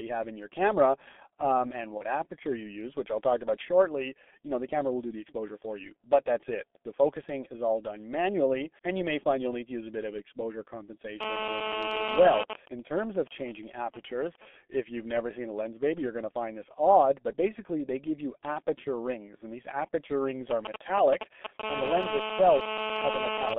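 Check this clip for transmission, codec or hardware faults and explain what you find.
The speech carries four kinds of fault: heavy coding damage throughout, one packet-loss gap, and two kinds of interference from a nearby 2G phone.

The G.723.1 codec shapes the whole clip. At 6.3 kbit/s, with a line band of only 250 Hz to 3.5 kHz, the voice is muffled, thin and hoarse, and consonants smear. The codec models the voice in 30 ms frames and updates that model slowly, so rapid changes blur. Unlike plain band-limiting, this adds a rough, grainy texture on top of the narrow bandwidth.

VoIP packet loss concealed by the speech codec occurs from 1.97 to 2.04 s, between "your camera um and" and "aperture you use which". The gap fits a single lost 30 ms frame. The decoder filled it by continuing the last pitch and filter shape at falling gain, so the sound briefly stretches into a buzzy tone or coloured noise. 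Because each frame builds on the previous one, the voice stays weak or distorted just after the gap. A dropout would leave silence instead.

GSM phone buzz appears from 11.21 to 12.43 s and again from 21.63 to 23.54 s, at about -1 dB and about -2 dB relative to the speech. This is nearly as loud as the voice. A phone in a call transmits radio bursts 217 times a second, and the audio circuitry rectifies them into a hard, raspy 217 Hz buzz with many harmonics. The buzz holds steady and has no connection to what is being said, which sets it apart from codec distortion.

GSM signalling bursts run from 12.43 to 14.48 s, ending before "if you've never seen", and again from 20.51 to 21.61 s, after "and these aperture rings". The first stretch sits well below the speech level. It matches a phone in a call whose user has gone silent, which comes through as even ticks with a longer buzz twice a second. 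The second is somewhat louder and matches the phone signalling to the network. Here the phone sends only short groups of bursts, so the rectified interference comes through as galloping dit-dit-dit ticks of brief 217 Hz buzzes rather than a continuous tone. That stuttering rhythm is what separates these bursts from the steady call buzz next to them. The first stretch of bursts follows directly on the full buzz, and the second leads directly into it.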